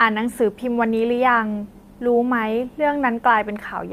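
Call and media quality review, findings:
Slight hiccups and a faintly unsteady, dragging tempo throughout the speech. Clock drift between sender and receiver: sender clock about 2% slow, so the receiver's jitter buffer keeps draining and must stretch playback to stay fed.

Repeated timing corrections, 0.04 to 3.88 s: small repeated fragments at uneven intervals, all lengthening, playback at 98% speed, roughly a tenth of a second added overall. Receiver-side buffer management inserting duplicated pieces to compensate for the slow sender.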